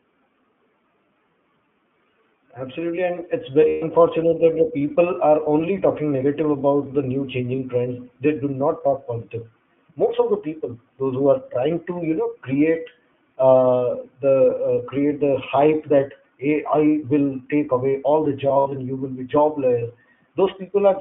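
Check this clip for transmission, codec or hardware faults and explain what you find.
Two faults are present: iLBC codec damage across the whole clip, and three bursts of lost iLBC frames.

From 0 to 21 s the iLBC codec is at work. It codes each short frame independently, which fits its 20 ms, 15.2 kbps mode, and the line band runs from 150 Hz to 3.5 kHz. The speech sounds rough and synthetic. A spectrogram shows nothing above 3.5 kHz.

Lost iLBC frames occur at 3.68–3.83 s, 7.56 s and 18.48–18.73 s. The first comes after "and it's" and before "that the people are", lasting 140 ms. The second follows "negative about the new" and lasts 20 ms. The third follows "all the" and is scattered over about a quarter second, with the longest run under a tenth of a second. In each gap the decoder repeats the last pitch cycle mixed with noise, so it sounds like a held, buzzy vowel. A waveform shows repeated, fading periods, and a spectrogram shows smeared, frozen harmonics.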